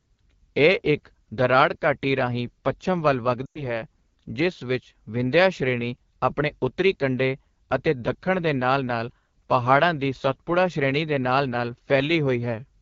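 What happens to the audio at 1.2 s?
At 1.2 s the speech is passing through the AMR wideband (HD Voice) codec, as it is for the whole clip, at a setting that fits its 8.85 kbit/s mode, one of the two lowest. Speech up to 6.4 kHz is rebuilt from a pulse-driven model of the vocal tract, with noise filling the band up to 7 kHz, and at this rate that model is too coarse. The voice comes out plainly rough and raspy.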